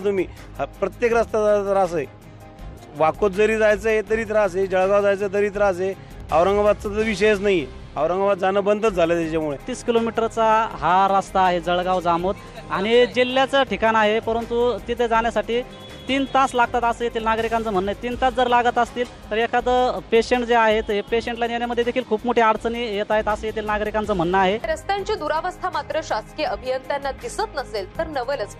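Nothing in this recording stands out as a technical fault, so there's nothing here to flag.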